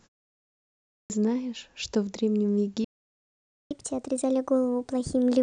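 A clipped start after a pause occurs at 0.97 s, where the speech resumes abruptly after nearly a second of silence. The output device appears to have dropped into a low-power state during the quiet stretch and had not fully woken or relocked when the next phrase arrived. About 130 ms is lost, through to roughly 1.10 s, so the phrase begins mid-sound, with its opening consonant or onset missing.

A playback stall runs from 2.84 s to 3.71 s. The speech cuts off mid-flow and the output goes dead for about 860 ms. The likely cause is the player running dry of buffered data or its audio thread being blocked, leaving nothing to send to the output until it recovered. The sound then picks up again.

Catch-up at higher speed follows from 3.71 s to the end of the clip. Having fallen behind during the stall, the player resamples its backlog to play it out faster, at 1.25 times normal speed. Because this is resampling rather than time-stretching, pitch rises along with tempo, by roughly four semitones, so the voice sounds hurried and noticeably higher. 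The speedup lasts through to the end of the clip.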